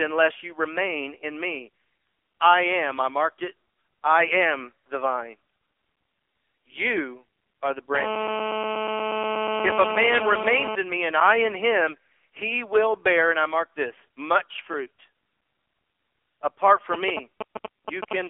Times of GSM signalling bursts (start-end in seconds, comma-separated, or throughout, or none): 16.94-18.13